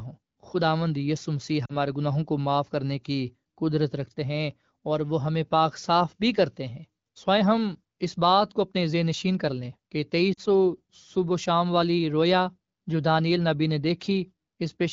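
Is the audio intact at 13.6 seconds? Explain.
Yes, at 13.6 seconds the speech is intact, carried cleanly through the AMR wideband (HD Voice) codec at a rate that fits about 15.85 kbit/s.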